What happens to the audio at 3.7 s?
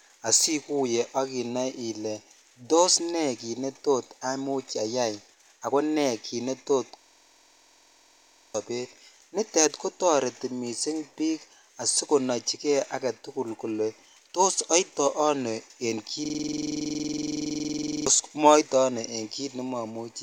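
Nothing goes wrong at 3.7 s: the audio is intact at that moment, with no dropout, click, distortion or other break in the signal.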